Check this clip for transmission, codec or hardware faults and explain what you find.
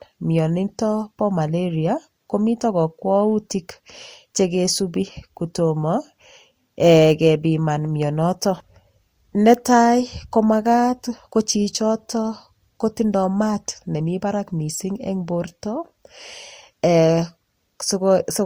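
One codec fault runs through the whole clip: transcoding between lossy codecs. From start to end the speech carries two layered sets of compression artefacts, likely from a Vorbis encode at roughly 46 kbit/s re-encoded as Opus at about 48 kbit/s. The second codec spends bits on the first one's artefacts and adds its own. Unlike a single low-bitrate encode, two distinct artefact textures are heard together, while the bandwidth still reaches 20.1 kHz.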